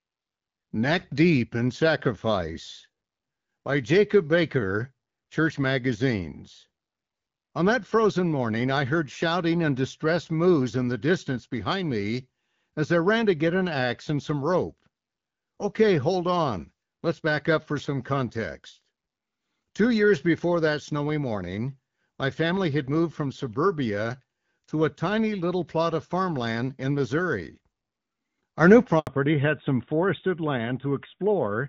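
Just after "plot of farmland in", at 27.48 s, the level steps up by about 4 dB in a single sample and holds there until 28.88 s. This is a sudden gain jump. The speech and the background noise rise together, so the noise floor itself lifts. The likely cause is a digital gain setting applied without a ramp. On a waveform the envelope widens abruptly at 27.48 s and narrows again at 28.88 s. A spectrogram shows the whole band brightening evenly across both edges.

From 28.99 to 29.07 s the sound drops out for 80 ms in a handover gap. The call was moving between networks, and no speech frames arrived during the switch. The speech fades within a few tens of milliseconds and then goes silent. Whatever was said in that window is gone, so the phrase sounds chopped. On the waveform this is a short flat stretch. On a spectrogram it is a narrow, fully dark vertical band that cuts across every frequency.

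When the link resumes at 29.07 s, the audio has changed from AMR-WB at 12.65 kbit/s to AMR-NB at 12.2 kbit/s. This fallback to narrowband lasts to the end of the clip. Before the gap, the HD Voice path carried speech up to about 7 kHz. Afterwards nothing remains above 4 kHz, so sibilants lose their edge and the speech turns duller, boxier and rougher. On a spectrogram all energy above 4 kHz stops at a hard horizontal ceiling starting at 29.07 s.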